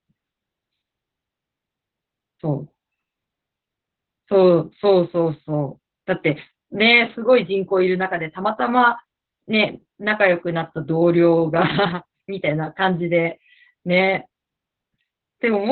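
From start to end the speech sounds muffled, hoarse and slightly robotic, with nothing above 4.2 kHz. This is heavy Opus voice compression: the narrowband SILK coder discards the upper band and codes the excitation coarsely, which fits a bitrate around 8 kbps.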